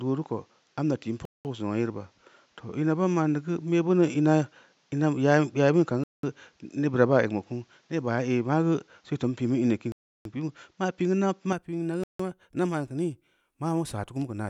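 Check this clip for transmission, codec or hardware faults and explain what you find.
Two faults are present in this speech: a change of input device that narrows the sound for most of the clip, and four short dropouts from a Bluetooth link.

From 0.0 s to 11.53 s the sound carries nothing above 7.6 kHz, has a fresh noise floor about 45 dB under the speech, and sits about 5 dB apart in level from the rest of the clip. That points to an input switched to a poorer device, likely a different microphone or a headset's call profile, with its own narrower band and tone. The speech sounds duller and boxier until it clears at 11.53 s, with no gap at the changeover.

At 1.25 to 1.45 s, 6.04 to 6.23 s, 9.92 to 10.25 s and 12.04 to 12.20 s, the audio drops to complete silence for 0.2 s, 0.2 s, 0.33 s and 0.16 s respectively, then resumes. This fits a Bluetooth stall, likely interference holding back packets so the headphones' buffer emptied and playback waited for the resent data. 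Each stall sounds like an abrupt hole cut into the speech.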